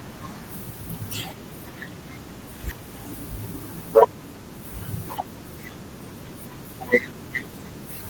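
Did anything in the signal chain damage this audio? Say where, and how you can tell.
Yes. At 2.71 s there is a skip ahead in the network and jitter-buffer stage. Roughly 0.4 s of speech is missing and the two sides join with no gap. That points to audio being discarded, not a dropout, which would leave audible silence.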